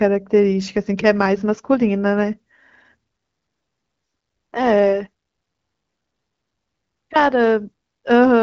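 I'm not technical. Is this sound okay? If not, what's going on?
Yes, the speech has no faults; it has passed through the AMR wideband (HD Voice) phone codec, which leaves it with light coding traces and nothing above about 7.5 kHz, as expected for an HD Voice call.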